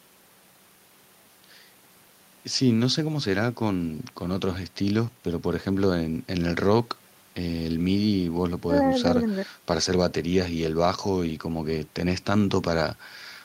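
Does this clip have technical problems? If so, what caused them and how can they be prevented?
No, there's nothing technical to flag here, so there's no cause to chase down and nothing that needs preventing.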